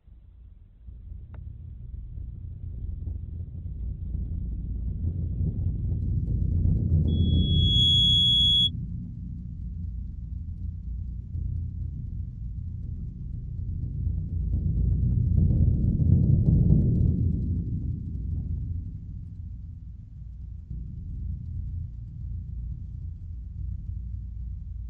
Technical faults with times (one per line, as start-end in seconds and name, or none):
0.00-6.00 adaptive stream starting at a low bitrate
7.07-8.71 loudspeaker feedback squeal